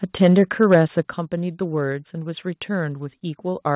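From 0.22 to 0.77 s the loudest syllables carry a harsh, crackling edge, the sound of microphone overload: peaks run about 4 dB past the converter's ceiling and their tops are sheared off, likely because the input volume was set too high. Only a small share of the waveform is flattened, so the crackle rides on the peaks rather than smearing every moment. That separates it from codec distortion, which would roughen quiet passages too, and from a crackling cable, which would pop at random.

At 1.02 s the whole sound, speech and background together, drops by about 7 dB in a single step: the microphone volume stepped down, probably the call software cutting input gain in reaction to the preceding clipped peaks. Because the change is instant and stays put, it differs from automatic gain control or compressor pumping, which glide down and recover. The narrow band, with nothing above 4 kHz, comes from the G.711-type call path, not from either fault.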